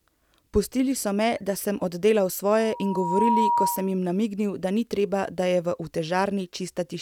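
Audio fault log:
2.59–3.99 s, loudspeaker feedback squeal: just after "me da sem oddelal", the microphone picked up its own loudspeaker, and the loop gain at 954 Hz rose above one, so that frequency fed on itself and kept growing. It sounds like a single steady tone that swells over roughly the first 0.7 s into a piercing squeal, ending up around 5 dB louder than the speech. It stops before "namignil da ni treba".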